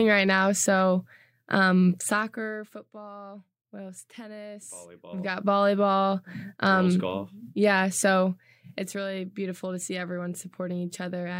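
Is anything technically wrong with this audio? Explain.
Yes. Zipper noise occurs at 2.02 to 2.77 s, 5.07 to 5.45 s and 8.15 to 9.04 s, as the speech level drops by roughly 20 dB, rises by roughly 20 dB, then drops by roughly 10 dB. Each gain move is applied in unsmoothed jumps, about a hundred per second, and every jump puts a small discontinuity in the waveform. The result is a fine, rapid ticking or buzzy zipping riding on the speech only while the level is moving.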